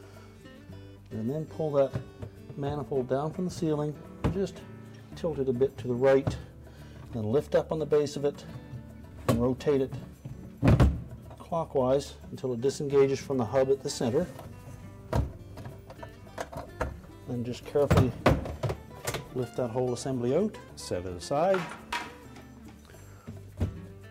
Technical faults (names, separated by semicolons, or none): repeated buffer